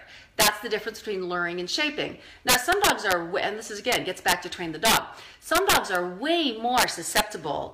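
Integer overflow cracks violently at 0.4, 2.49, 3.92, 4.85, 5.55 and 6.78 s. Peaks about 3 to 8 dB over the limit wrap to the opposite sign.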